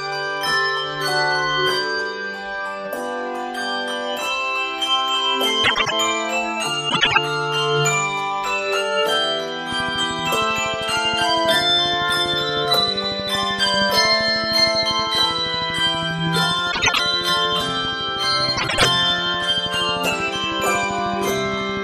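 Frames out of order at 5.64–5.92, 6.89–7.18, 16.72–17.00 and 18.57–18.85 s. Two neighbouring runs of frames swap places, so each stretch plays halves reversed. It sounds like a garbled flutter.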